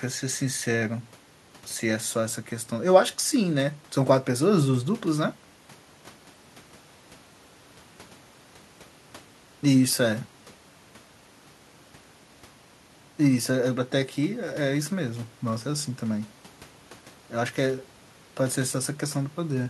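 Nothing in the recording stands out as a technical fault at any point, so there's simply nothing to flag here.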